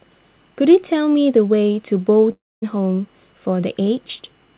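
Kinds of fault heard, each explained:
long network dropout: Packets likely stopped arriving around 2.32 s, so the receiver extended the last sound into a fading buzz or hiss, which thins to near-silence for about 0.24 s before the speech returns at 2.64 s with roughly 0.3 s lost.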